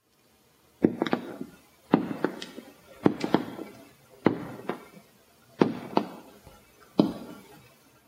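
Gain pumping runs through the whole clip of sounds. The overall level rises and falls with the louder events, swinging by around 5 dB. This is likely caused by input gain set far too high for the microphone, with a fast limiter or compressor clamping down whenever a loud sound arrives and then releasing. The effect is audible as a squashed quality, with loud and soft moments pressed closer together in level.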